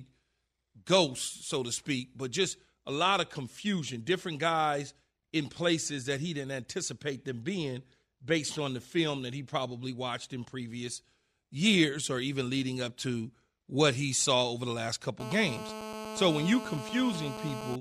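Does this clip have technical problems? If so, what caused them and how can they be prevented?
Yes. From 15.20 to 17.76 s there is GSM phone buzz: a nearby 2G phone on a call transmitted in bursts about 217 times a second, and the audio circuitry rectified those radio pulses. This produces a steady, raspy 217 Hz buzz, rich in harmonics, about 9 dB below the speech. Keeping phones switched off, in airplane mode, or well away from microphones and cables prevents it.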